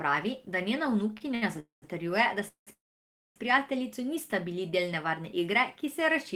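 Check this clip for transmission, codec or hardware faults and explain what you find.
The clip has network delivery faults: one burst of repeated stalls (stutter) and three call audio freezes. In each, the audio pauses and then resumes where it left off.

Repeated stalls (stutter), 1.13 to 1.44 s, right after "da njena": packets reached the receiver's jitter buffer late, so it ran dry four times. The receiver extended the last sound to cover each gap, the longest 68 ms, filling about 122 ms in total, roughly 40 percent of that stretch. The result is choppy and dragging, with nothing actually lost.

Call audio freeze, at 1.60 to 1.84 s, 2.48 to 2.69 s and 2.73 to 3.38 s: these were likely caused by packets held up in transit, which emptied the jitter buffer. The receiver prolonged the last sound briefly, then faded to silence for about 140 ms, 110 ms and 600 ms respectively. Playback then continued from the same point, leaving gaps of 223 ms, 187 ms and 632 ms inserted with no audio missing.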